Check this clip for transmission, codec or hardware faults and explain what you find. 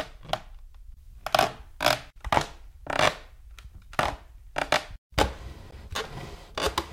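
One fault turns up. At 5.71 s the sound cuts out for about 14.5 ms and then resumes further along, as though it kept playing through the hole. This is most likely a Bluetooth dropout: one audio packet, judging by the gap's length, arrived too late for the headphones and was discarded.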